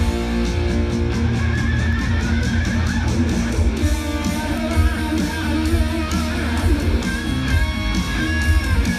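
Bit error spikes at 1.93, 3.72 and 4.58 s, about -22, -34 and -10 dBFS: single flipped-bit samples that tick, showing as lone waveform needles and full-height spectrogram lines.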